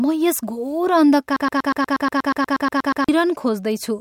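From 1.36 s to 3.09 s the speech freezes into a broken-record loop: a single 120 ms fragment plays 14 times back to back, giving a rapid, mechanical stutter at a little over eight repeats per second. The likely cause is a player, encoder or stream that stalled and kept resending the last fragment it held. Whatever speech belonged in those 1.7 seconds is missing, and the audio resumes afterward without it.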